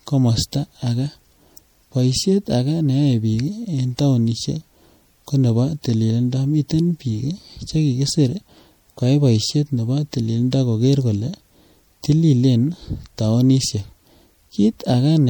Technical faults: MP3 compression

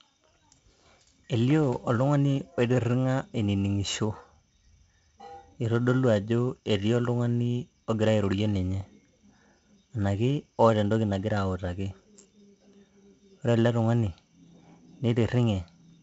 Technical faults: 4-bit ADPCM compression

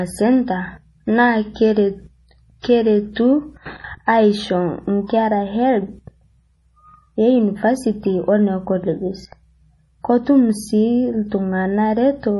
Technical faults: MP3 compression; pre-echo

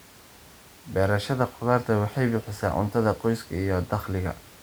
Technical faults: none

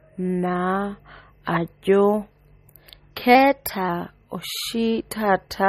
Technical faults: MP3 compression; drift correction step

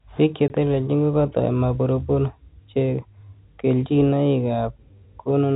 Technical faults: packet loss filled with silence

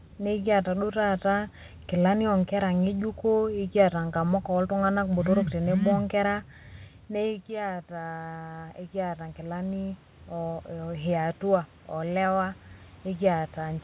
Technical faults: automatic gain rising

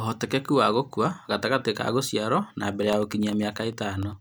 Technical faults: periodic USB or driver dropouts

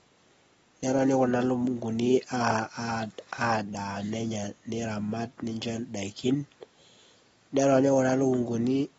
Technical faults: AAC compression

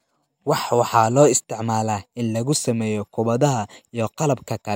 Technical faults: none

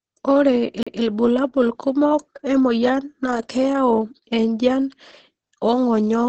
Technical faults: Opus voice compression; CD skip

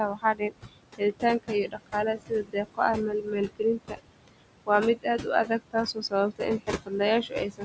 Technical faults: noise suppressor artifacts; speech cut by the noise suppressor

